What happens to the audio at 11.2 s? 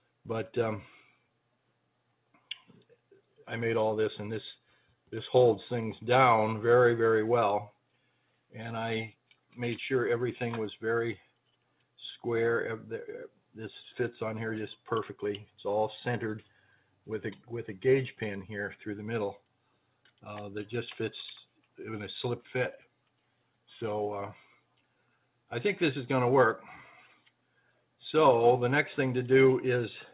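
At 11.2 s the sound is cut by the noise suppressor. Between 11.17 and 11.49 s the suppressor mistakes part of the signal for background noise and pulls it down. The level dips by about 11 dB at its deepest. Only around 150 ms of that stretch is actually hit, so the sound sinks in level rather than vanishing. Sustained or decaying parts lose the most, while sharp onsets survive. All of it sits inside the call band, which stops at 4 kHz.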